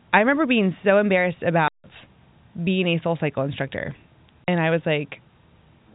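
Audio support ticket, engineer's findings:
Block of digital silence at 1.68–1.84 s (160 ms), after "remember being so embarrassed", and at 4.44–4.48 s (40 ms). Hard cuts to silence. Probable cause: output buffer not filled in time.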